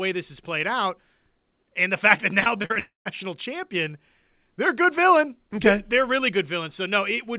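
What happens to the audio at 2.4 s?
Right after "fact that", from 2.4 to 2.77 s, the speech turns choppy and robotic, with small pieces dropping out. This is repeated packet loss: six short gaps, the longest 40 ms, each patched by stretching the preceding sound, which covers about a third of that span.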